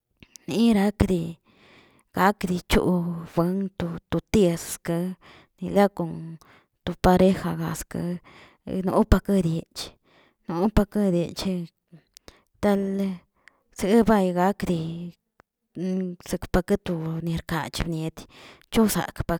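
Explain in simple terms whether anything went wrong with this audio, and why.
Loud pop at 1.01–1.04 s, and a softer one at 17.81–17.84 s: likely a sudden electrical jolt, added on top of the continuing speech.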